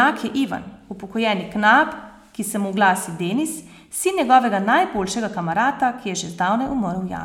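Listening closely to the speech recording, nothing stood out as a technical fault at any point.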